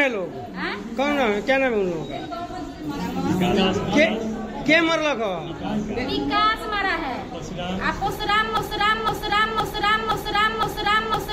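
A stalled player or stream likely kept resending its last buffered fragment, producing a broken-record loop: from 8.57 s to the end, a 0.51 s piece repeats five times, replacing the audio.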